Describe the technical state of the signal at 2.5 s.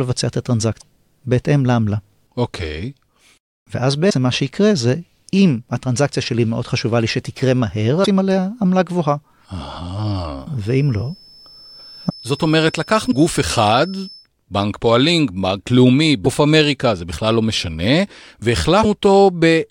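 At 2.5 s the speech signal is intact, with no audible fault at that moment.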